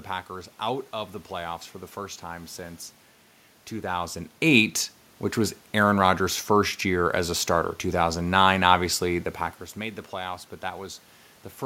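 Nothing has gone wrong technically in this speech recording; the room noise in the background and the level shifts around 4 and 9 seconds, where the talker moves nearer to or further from the microphone, are part of the recording itself.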